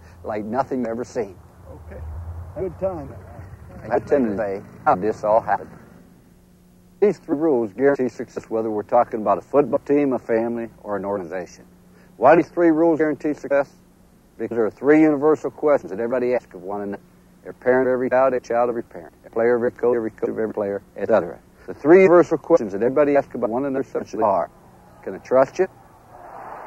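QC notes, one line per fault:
No faults heard anywhere in this audio.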